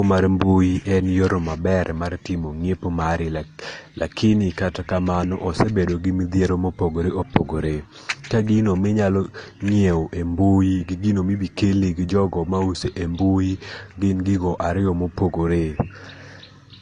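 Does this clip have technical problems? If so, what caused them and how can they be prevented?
Yes. Throughout the speech there are layered compression artefacts: smeared, swirly high-frequency detail with a second, different kind of graininess on top, and nothing above 9.8 kHz. This is likely transcoding between lossy codecs, an earlier low-bitrate AAC-style encode re-encoded to Opus, which spends bits reproducing the first codec's artefacts and adds its own. Unlike a single low-bitrate encode, two distinct artefact textures are heard together, and the band limit is lower than Opus at a moderate rate would normally impose. Prevent it by encoding once from the original uncompressed source.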